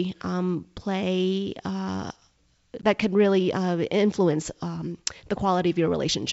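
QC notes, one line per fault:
2.82–2.85 s, packet loss on an ADPCM call: what sounds like a single lost packet, about 10 ms, is replaced by silence, desynchronising the decoder's predictor and step size. A hard-edged gap, then a slightly distorted return on "could really uh", settling within tens of milliseconds.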